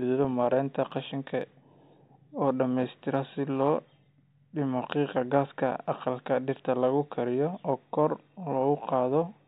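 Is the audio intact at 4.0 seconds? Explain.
Yes, at 4.0 seconds the speech plays through intact, with no dropout, click, distortion or other technical fault at that point.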